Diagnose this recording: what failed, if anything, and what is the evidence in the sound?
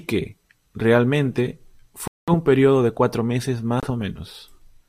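Speech cuts to silence at 2.08–2.30 s and 3.80–3.88 s, then resumes: likely a Bluetooth stall, the headphone buffer emptying while packets were resent.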